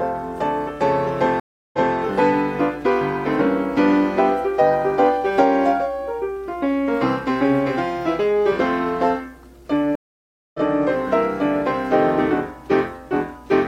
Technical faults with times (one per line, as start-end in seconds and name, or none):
1.40-1.96 stream reconnect
9.95-10.60 stream reconnect